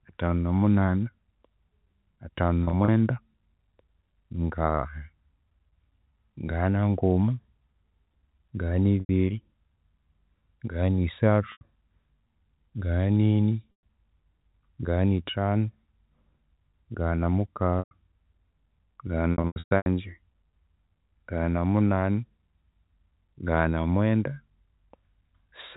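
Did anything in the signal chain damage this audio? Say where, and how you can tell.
Yes. Network packet loss with pitch repetition at 2.64–2.88, 9.0, 11.52, 13.72, 17.79 and 19.33–19.86 s. Lost packets get bridged by repeating the last pitch period, which sounds held and buzzy.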